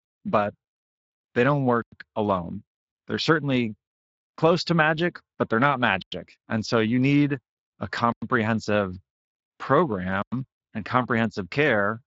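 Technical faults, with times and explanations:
1.82, 6.02, 8.12 and 10.22 s: gap between chunks. The speech stops dead for 100 ms each time, then resumes where it left off. The audio arrives in 2-second chunks with silence inserted at each join, so nothing is lost, only interrupted.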